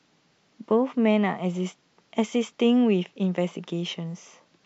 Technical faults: none

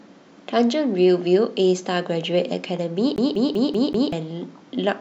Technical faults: CD stuck on one turn

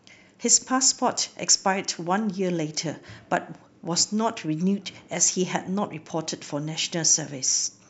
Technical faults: none

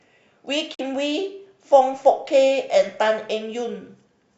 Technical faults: corrupt frame muted

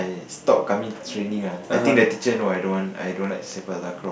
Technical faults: train of clicks

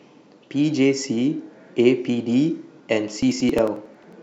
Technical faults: periodic USB or driver dropouts

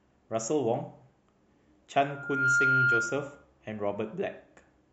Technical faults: loudspeaker feedback squeal

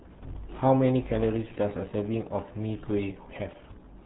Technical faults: RealAudio 14.4 codec

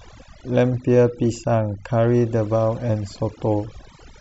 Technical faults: overdone noise removal

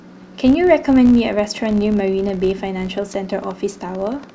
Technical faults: filter restarted on every block; train of clicks

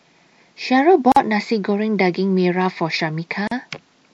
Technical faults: MP3 compression; gap at a join of encoded pieces

